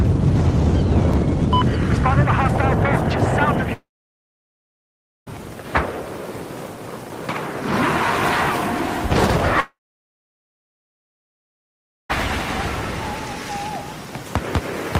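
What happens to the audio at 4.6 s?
At 4.6 s the audio sits inside a long network dropout running from 3.73 to 5.36 s, likely from packets that never arrived. About 1.5 s goes missing: a brief fading buzz, then about 1.4 s of silence, showing as a flat waveform and a blank spectrogram band.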